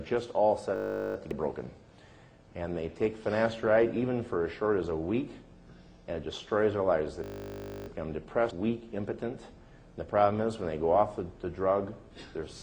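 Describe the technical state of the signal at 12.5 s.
At 12.5 s the signal is intact, with no dropout, distortion, clicks or other technical fault audible.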